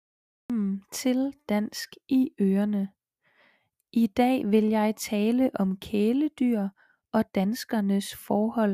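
For the first 0.5 s there is only digital silence, and then the speech enters abruptly at 0.50 s, already partway through a sound. This is a cut-off start: capture or streaming began late, so the opening of the utterance was never recorded. Unlike a noise gate or a slow fade-in, there is no gradual rise or natural attack. The sound is simply present at full level from its first sample, with its beginning missing.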